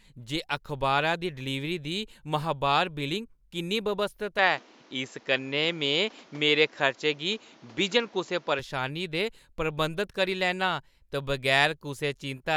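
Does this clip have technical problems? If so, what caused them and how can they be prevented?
Yes. After "किन्नी व्यवस्थत", from 4.39 to 8.59 s, the sound dulls, likely an input switched to a poorer device: the spectrogram empties above 7.6 kHz and the waveform level shifts about 5 dB. Fixing the recording to one microphone and disabling automatic input switching would prevent this.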